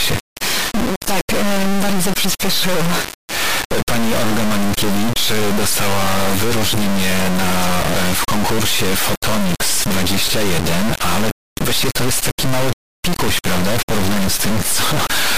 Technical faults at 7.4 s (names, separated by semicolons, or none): integer read as float